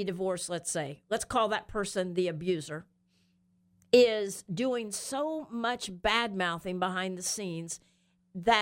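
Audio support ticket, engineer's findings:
No audible defects found in the speech signal: level and continuity steady throughout, no action required on the playback or capture path.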